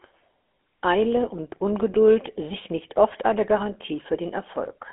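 Throughout the speech, GSM full-rate codec damage is plainly audible: the excitation is rebuilt from coarsely spaced pulses, giving a buzzy, gravelly roughness consistent with a 13 kbps stream. A spectrogram shows energy confined to roughly 250 Hz to 3.4 kHz, empty above 3.8 kHz.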